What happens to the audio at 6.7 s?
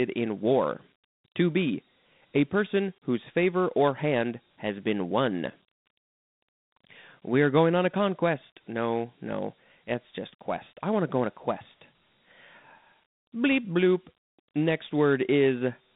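Dialogic VOX ADPCM affects 6.7 s as part of the whole clip: coarse 4-bit coding, consistent with 32 kbps, leaves gritty hiss riding the speech, with the band cut above 3.8 kHz.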